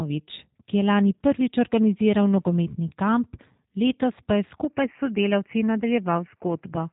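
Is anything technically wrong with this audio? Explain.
Yes, two things.

The whole clip has a G.729 codec sound: everything above about 3.8 kHz is gone, and the speech has that rough, slightly synthetic edge. The audio is rebuilt from a vocal-tract filter, pitch predictor and a few pulses per frame, which fits an 8 kbit/s call stream.

From 4.64 s to the end the sound abruptly turns duller and boxier, with the top now stopping around 3 kHz and a faint new noise floor underneath. There's no gap and the level stays put. That's likely the input switching to a poorer device mid-recording.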